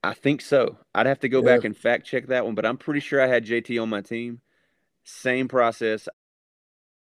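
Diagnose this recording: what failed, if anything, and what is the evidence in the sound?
Nothing in the chain has failed, and the speech recording shows no evidence of a fault at any stage. Near the end the level eases down in a smooth fade-out from about 6 s, reaching silence at 6.14 s with no click or hard edge.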